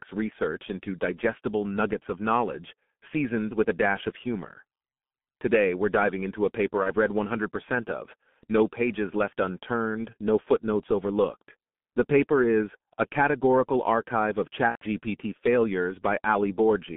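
A speech clip carries heavy G.723.1 codec damage throughout. The sound is muffled and hoarse, and consonants blur. The band sits between 150 Hz and 3.5 kHz, which fits a low bitrate near 6.3 kbit/s. VoIP packet loss concealed by the speech codec also occurs twice. At 6.83 s, just after "diving into a paper", the sound smears into a fading stretch for about 70 ms. That fits one lost 30 ms frame. At 14.69 s a longer fade, ending in silence, lasts about 150 ms. That points to roughly 120 ms of missing packets, first bridged by the decoder repeating its last pitch at falling gain, then muted.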